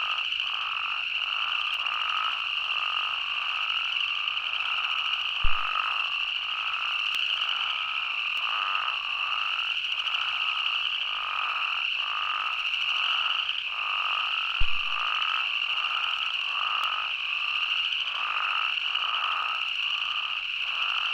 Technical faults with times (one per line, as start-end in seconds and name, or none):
1.74 dropped samples
5.45-5.59 phantom power thump
7.15 dropped samples
8.37 dropped samples
14.61-14.99 phantom power thump
16.84 dropped samples